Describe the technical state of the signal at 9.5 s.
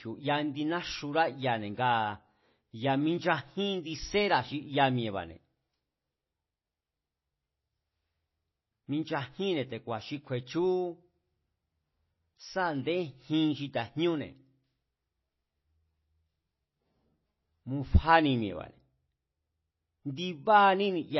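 At 9.5 s, as throughout, the speech has MP3 compression: treble cut above 5.8 kHz, weak components flickering out, giving a watery swirl, likely from a 24 kbps bitrate.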